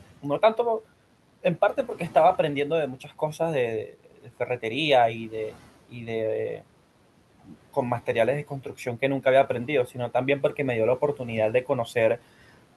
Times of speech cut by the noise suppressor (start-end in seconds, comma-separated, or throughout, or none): 3.94-4.29